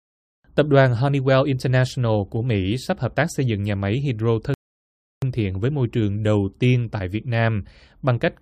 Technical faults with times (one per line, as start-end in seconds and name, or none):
4.54-5.22 rebuffering stall